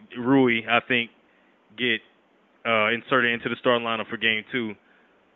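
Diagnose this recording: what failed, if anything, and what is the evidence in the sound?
Nothing failed in this recording, and the sound offers no evidence of any fault.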